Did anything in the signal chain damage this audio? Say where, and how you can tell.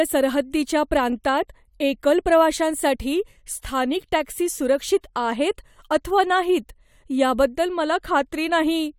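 No, nothing in the signal chain damaged this audio.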